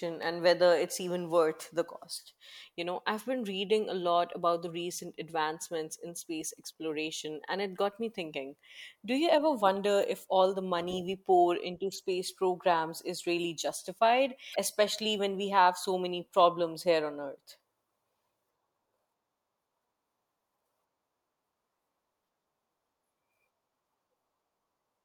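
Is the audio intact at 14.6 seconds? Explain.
No. Damaged data in the compressed stream at 14.51–14.56 s makes the decoder lose sync and resynchronise, giving a brief chirp, squawk, click or short hole.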